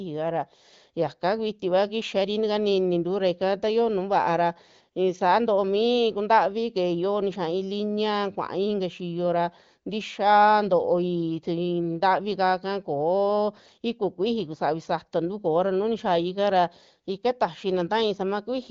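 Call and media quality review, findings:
No faults found.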